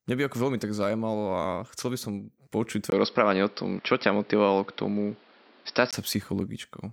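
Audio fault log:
2.90–5.93 s input switched to a poorer device: after a 20 ms gap, nothing above 5.6 kHz, new hiss and a shifted level, unlike simple filtering; likely a device change.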